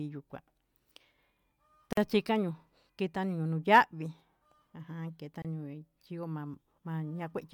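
Gap at a join of encoded pieces, twice in this speech clip: a silence of about 46 ms from 1.93 to 1.97 s, and a shorter one of about 26 ms from 5.42 to 5.45 s. Each is a hole that opens abruptly in continuous sound, its edges smeared, before the speech resumes exactly where it broke off. The pieces were encoded separately and butted together untrimmed, so encoder start-up delay and final-frame padding remain as dead air at each seam.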